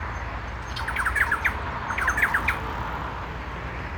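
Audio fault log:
Nothing stood out on listening to this audio.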